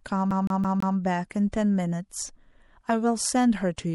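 Throughout, the speech sounds watery, with dulled treble and swirling sibilants. That points to MP3 compression, likely at a low bitrate around 64 kbps.

From 0.31 to 0.97 s, the CD is stuck on one turn. A 165 ms slice repeats four times, each jump briefly muted, giving a rapid, even stutter.

At 2.77 s, compressed frames are skipped. About two 26.1 ms frames vanish, roughly 50 ms of speech. The join is a short smeared blip, not a click.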